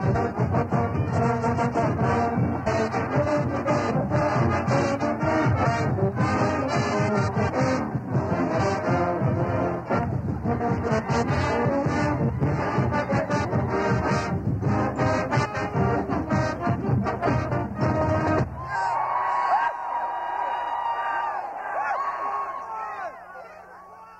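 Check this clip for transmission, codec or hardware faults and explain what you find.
No transmission, codec or hardware faults can be heard anywhere in this audio.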